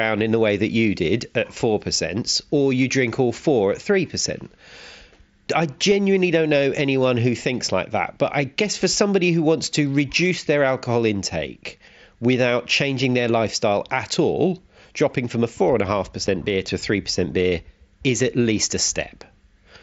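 At 16.27 s, just before "beer to a", there's a single dropout from unconcealed Bluetooth headset packet loss. A voice packet between headset and phone never arrived, and nothing patched over it, so silence or an idle pattern filled the gap. You hear a tiny hole, about 7.5 ms long, with abrupt edges, which fits one lost frame. The link itself is running mSBC, the wideband headset codec, with its light graininess on loud sounds.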